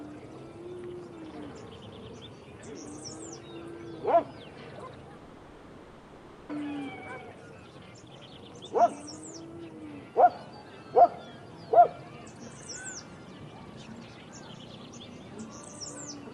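This is a recording of sounds. From 5.17 s to 6.52 s the real audio stops. For about 1.3 s the receiver keeps extending the last sound as a buzzy, hissing tail that fades but never reaches full silence. The sound then resumes, and that stretch is gone. The likely cause is a long network dropout, with packet loss concealment covering the gap. The call codec's coding noise and its cut-off near 12 kHz can also be heard.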